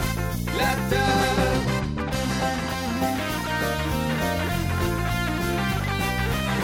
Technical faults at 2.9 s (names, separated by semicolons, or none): none